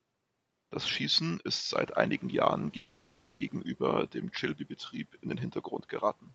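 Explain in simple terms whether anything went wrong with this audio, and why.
Yes, two things went wrong. The first is the noise suppressor catching up. Around 1.5 s the background noise in the room jumps up. From 1.69 s to 3.63 s that louder noise comes through the speech more strongly than it should, then gradually sinks as the suppressor adjusts, which takes about 1.3 seconds. This is not a change in the room itself. The noise stays steady, and only the amount of cleanup slowly increases until it settles.

The second is a call audio freeze, from 2.76 s to 3.41 s. For about 0.64 seconds the speech stops moving forward. The last sound is stretched into a fading buzz or hiss, and then the audio picks up exactly where it left off. The likely cause is that data packets were held up on the way and the receiver's buffer ran empty. Unlike a dropout, nothing is lost. The audio is simply delayed, with a filler gap inserted.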